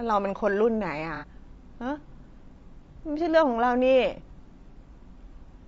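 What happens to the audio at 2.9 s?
At 2.93 to 2.98 s there's an AAC frame loss with concealment. A chunk of the stream, about 30 ms of audio and consistent with a single lost frame, never made it, so the decoder patched the gap by reusing the last good spectrum and shuffling its phases. You hear it as a brief smeared, noisy and phasey blur. It's too short to drop into silence, so the sound just goes mushy for an instant and carries on.

Underneath that, the whole clip has a rough, grainy quality, with noise sitting between the voice's harmonics and a thin, somewhat synthetic top end. That's likely low-delay AAC compression, the AAC-ELD flavour used in video calls, running at a low rate that fits something like 32 kbps. At that low rate the damage is plainly audible, and it colours the concealed patch too.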